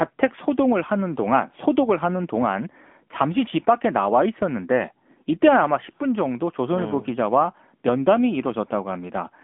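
From start to finish the speech is boxed into a thin telephone band, roughly 200 Hz to 3.5 kHz, with nothing at all above 3.6 kHz, and the codec damage is plainly audible as a buzzy, synthetic edge on the voice. This is the AMR narrowband mobile codec at work. The 8 kHz sampling removes all the upper frequencies, and the vocal-tract model rebuilds each 5 ms from a few pulses. The degree of roughness fits a mid-range rate around 10.2 kbps.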